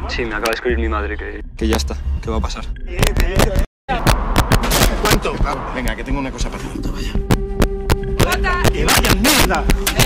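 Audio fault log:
0.46–0.53 s, 1.73 s, 3.03–5.14 s, 5.88 s and 7.31–10.05 s, integer overflow: loud peaks exceeding full scale, by about 2, 2, 7, 0 and 11 dB at the worst, wrap to the opposite sign instead of being held at the limit. This produces violent cracks, far harsher than clipping's flattened distortion, and they grow densest in the final stretch.
3.65–3.90 s, stream reconnect: the sound drops to silence for 236 ms, then resumes roughly a fifth of a second further on as a fresh decoder picks up mid-stream. Unlike a plain dropout, material is skipped, so the sound after the gap does not continue from where it stopped.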